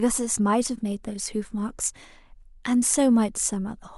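From 0.75 to 0.81 s the speech has frames out of order. Two adjacent blocks of about 23 ms play swapped, giving a brief garbled flutter.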